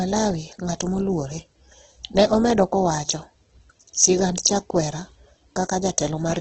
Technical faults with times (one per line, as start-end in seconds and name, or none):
0.00-6.41 Opus compression